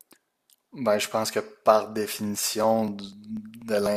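Starting at 2.14 s and running to 3.86 s, something blocks the USB bus or audio driver every 0.246 s, causing periodic USB or driver dropouts. About seven times in that stretch, a few milliseconds of speech are skipped outright rather than filled with silence, so the waveform jumps straight across each gap. That splice leaves an evenly spaced tick or pop roughly four times a second, audible only while there is signal to break.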